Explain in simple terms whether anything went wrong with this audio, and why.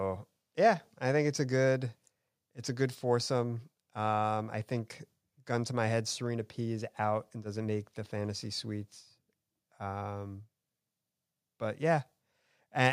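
Nothing stood out as wrong when listening to this speech recording.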